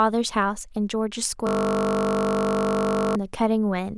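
Speech here, and partway through it runs into a system hang loop. From 1.47 s to 3.16 s the audio stops moving forward and the same 20 ms slice plays back-to-back 84 times, so instead of speech you get a flat, steady buzz at 50 Hz, the loop rate. That's the sound card happily cycling its ring buffer while the machine or driver feeding it has frozen, and the short loop points to a buffer of about 20 ms.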